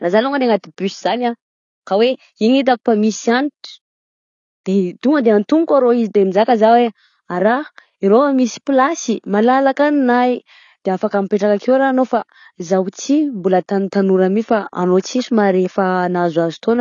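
From start to finish, the speech sounds dull and smeared, with a warbling, fizzy edge on sibilants. This is likely AAC compression at a low bitrate, which fits about 24 kbps. A spectrogram shows nothing above 7 kHz.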